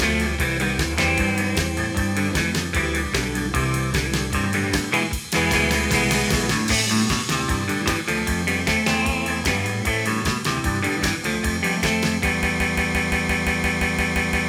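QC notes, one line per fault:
12.43–14.49 s, broken-record loop. A 0.17 s fragment repeats exactly, back to back, twelve times until the clip ends. The sound that belonged there never plays. The player or stream likely stalled and kept resending its last buffered piece.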